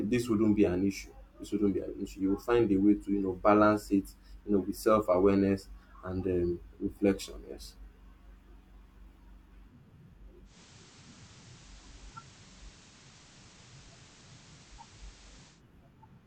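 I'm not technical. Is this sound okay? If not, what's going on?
No. From 10.44 s to 15.63 s the speech shows digital radio blending to analogue: the receiver lost its digital signal and faded over about 155 ms to the station's FM broadcast. Hiss appears, and it gets slightly quieter.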